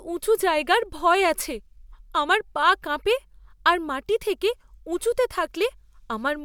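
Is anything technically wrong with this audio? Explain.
No, nothing technically wrong turns up anywhere in this recording.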